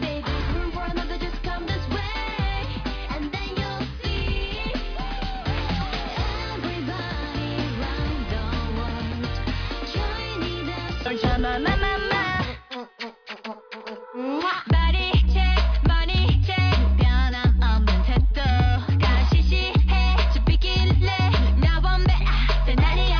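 No technical faults can be heard anywhere in this audio.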